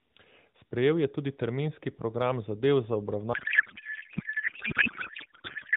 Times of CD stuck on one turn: none

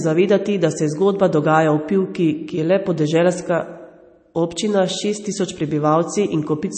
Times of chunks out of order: none

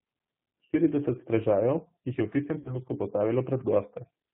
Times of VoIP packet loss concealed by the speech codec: 2.59-2.77

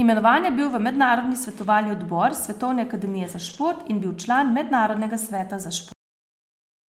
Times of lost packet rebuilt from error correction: 3.49-3.63, 5.37-5.39

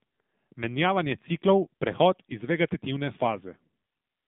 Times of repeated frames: none

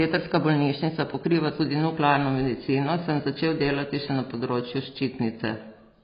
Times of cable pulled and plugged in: none

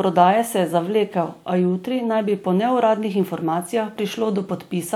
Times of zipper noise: none

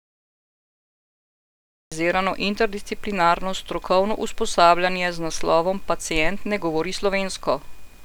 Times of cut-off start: 0.00-1.92

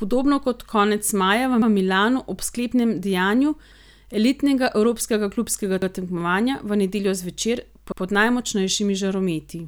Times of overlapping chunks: 1.62-1.72, 3.72-3.82, 5.82-5.92, 7.92-8.02

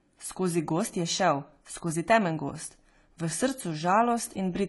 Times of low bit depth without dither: 3.26-4.68

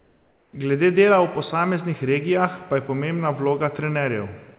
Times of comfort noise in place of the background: 0.00-0.53

